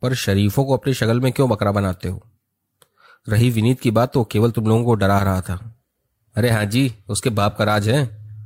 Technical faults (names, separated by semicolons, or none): none